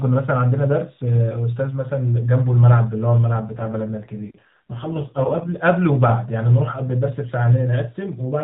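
From 3.42 s to 5.63 s the speech turns rougher, buzzier and more synthetic, with no gap or change in bandwidth, then clears. This is an AMR rate drop. The codec spent fewer bits on the voice, consistent with a fall from 12.2 to 5.9 kbps.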